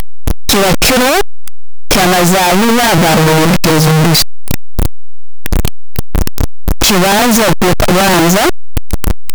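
Speech runs through the whole clip under a fault heard as signed and unsigned mixed up. It sounds extremely loud and harsh from start to finish, and quiet moments blare as loudly as the rest. The likely cause is 8-bit samples read with the wrong sign convention, so each zero crossing leaps across the full range.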